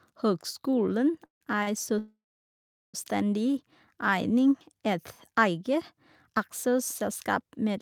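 At 1.25 s the speech hits a call audio freeze lasting about 0.15 s. The last sound hangs as a brief fading buzz or hiss, then roughly 0.13 s of silence, likely because packets were held up and the jitter buffer ran dry. It resumes right where it stopped, nothing lost, just pushed later.

At 1.63 s there's a short stall from a late packet. A sound is stretched for about 40 ms with a slight buzz or dip while the receiver waits for the packet, then it carries on without dropping anything.

At 1.99 s a much longer call audio freeze kicks in, running to 2.96 s. The held sound fades out into about 0.77 s of silence before the speech picks up again intact, now more than a second behind.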